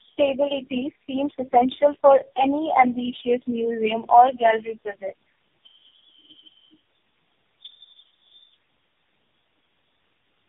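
Throughout, tandem speech coding: repeated low-rate recoding, pointing to roughly four codecs in a row, compounds damage into rough, warbly, muffled speech with nothing above 3.6 kHz.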